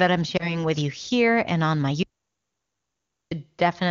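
At 0.37 s the speech gives a brief warble and dip, with a short stretch of weak, rough sound before it steadies by about 0.60 s. These are lost AMR speech frames. The gap is the length of a single 20 ms frame: a corrupted frame failed its check, and the decoder filled in by repeating the previous pitch and vocal tract settings at lower gain. Recovery then took a moment. The wideband coding around it stays clear.

From 2.03 s to 3.31 s the sound cuts out mid-flow into silence, with no room tone at all, for about 1.28 s before resuming abruptly. This is an audio dropout to silence. Anything spoken in that stretch is simply gone. The dead-flat gap points to the input feed being lost, likely through a dropped link or device, while the recorder kept writing silence until the signal returned.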